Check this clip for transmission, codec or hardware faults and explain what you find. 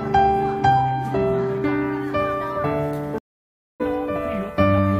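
One fault is present: a stream reconnect from 3.18 to 3.81 s. The connection dropped and a fresh decoder restarted mid-stream, leaving about 0.61 s of silence before the audio resumes roughly 0.7 s further on.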